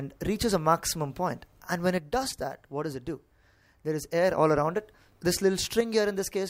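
At 1.98 s the level falls abruptly by about 6 dB and stays down until 4.38 s, then drops the same way again from 5.81 s to the end. The likely cause is one channel dropping out, leaving the mono sum with half the shared signal and nothing from that side alone. On a waveform the envelope shrinks to half height in sharp steps; a spectrogram shows uniform dimming across all frequencies, with edges cut square.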